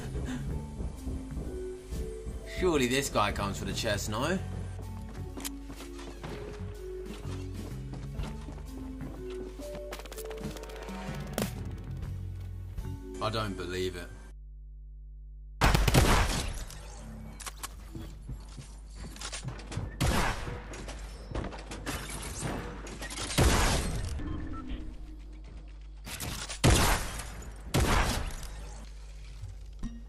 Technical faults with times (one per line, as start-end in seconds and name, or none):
0.00-30.09 mains hum